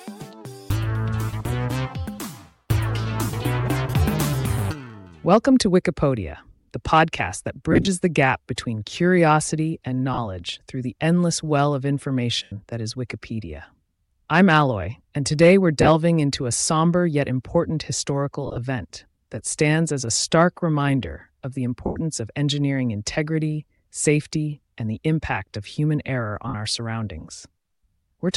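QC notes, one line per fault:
7.72–7.88, 10.14–10.18, 12.43–12.52, 15.81–15.89, 18.47–18.58, 21.86–21.96, 26.48–26.54 s: lost LE Audio frames. Gaps of 37.5 to 97.5 ms, some scattered as short runs up to about 30–40 ms, which fits 7.5 ms frames. The decoder conceals each gap by repeating the last spectrum with random signs, so tonal content smears into noise. The longer gaps begin to fade toward silence before the sound resumes.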